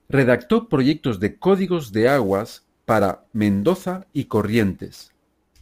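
From 2.08 s, after "proyectos de códigos de", sample clock jitter sets in. Timing errors of around ten microseconds add a rough hiss that follows the speech's louder, brighter sounds.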